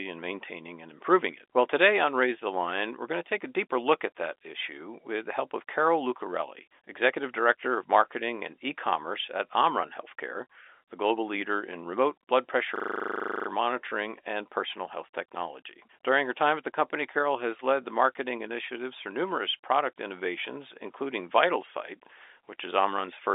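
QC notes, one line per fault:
12.76–13.48 s, system hang loop: the system froze after "in remote blood pressure" while the audio hardware kept replaying one 40 ms buffer 18 times. At 25 repeats a second this is a coarse buzzing stutter before "monitoring and personal health" resumes with essentially nothing missing.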